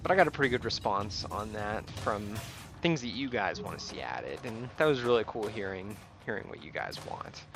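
Nothing here stands out as a technical problem; the audio just runs along without any glitch, dropout or odd artefact catching the ear.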